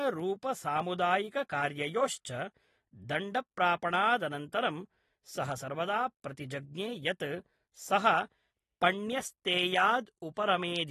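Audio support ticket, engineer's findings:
AAC compression artefacts throughout, 0 s to end. Speech dull and smeared, audible warble and fizz on sibilants and held vowels. Hard lowpass: nothing above 12.4 kHz. Damage level fits a low bitrate around 36 kbps. Probable component: the encode stage, likely an AAC-LC encoder starving the high bands. Spectrogram: flat ceiling at 12.4 kHz, patchy holes and blocky noise-filled bands beneath it. Waveform: no obvious change.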